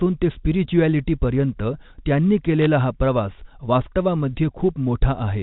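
A short speech clip carried over a G.711 phone line, with nothing above 4 kHz. Bit errors on a digital phone line break in from 2.62 to 2.66 s, between "ते स्पिरिच्युॲलिटीपर्यंत त्यांनी" and "हा प्रवास". A brief burst of sharp ticks and crackle rides over the speech. Each flipped bit corrupts one 8-bit sample. Hits on the high bits, or on the sign of a loud sample, throw that sample far off, causing the clicks. The burst fits an error rate well under one percent across a few frames.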